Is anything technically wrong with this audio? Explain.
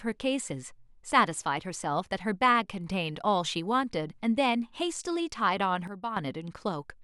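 Yes. From 5.88 to 6.17 s there is a sudden gain jump: the speech and its background noise drop together by about 11 dB, then return. The likely cause is a gain setting applied without a ramp. On the waveform the envelope steps down and back; the spectrogram dims uniformly across all frequencies.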